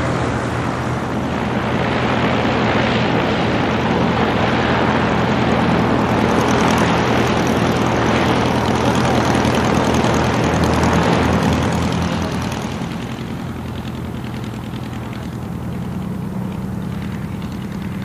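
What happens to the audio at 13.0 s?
At 13.0 s, as throughout the clip, video or display buzz is present. A screen or video cable couples a 60 Hz buzz with hash above it, roughly 20 dB below the audio.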